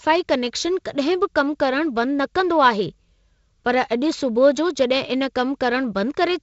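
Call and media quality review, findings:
Nothing stood out on listening to this speech clip over the G.722 wideband telephone path.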